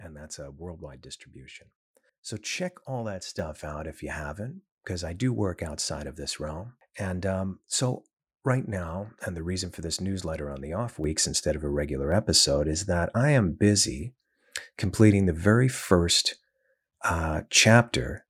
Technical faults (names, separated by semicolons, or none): microphone volume stepped up